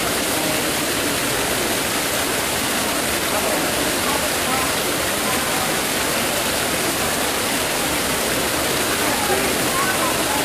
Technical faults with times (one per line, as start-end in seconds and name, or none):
none